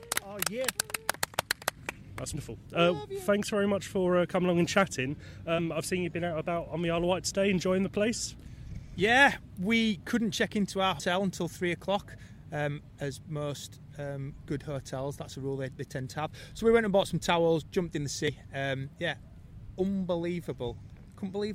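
Damaged data in a compressed stream causes brief chirps or blips in the audio at 2.32, 5.58, 8.38 and 10.99 s and from 18.28 to 18.30 s. At each point, corrupted bytes make the decoder misread frames and lose sync until it finds the next frame header.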